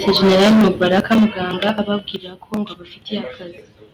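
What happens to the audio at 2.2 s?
At 2.16 s the speech and the background noise beneath it drop together by about 6 dB in a single step. This is a microphone volume stepped down, likely the call software lowering the device's input gain after judging the microphone too loud.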